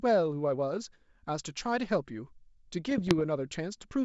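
From 2.87 s to 3.21 s the speech is hit by bit errors on an ADPCM link. The wideband G.722 coding carries it, clear up to about 7 kHz. For about a third of a second, a few bits in every thousand arrive flipped. Each flip throws off the decoder's step size and predictor. The damage rings on for several milliseconds before it settles. It sounds like scattered pops and rough, gritty bursts, with the level jumping briefly.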